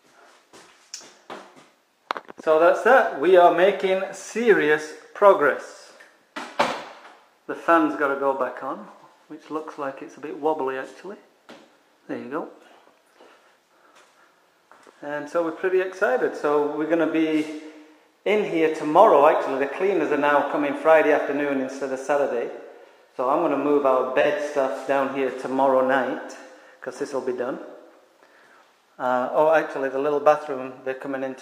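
At 6.67 to 6.73 s and again at 24.20 to 24.26 s, AAC frame loss with concealment: each time about 43 ms of data went missing, and the decoder rebuilt it from the preceding spectrum. It sounds like a brief smeared, noisy or phasey patch, and on a spectrogram it shows as a short blurred block.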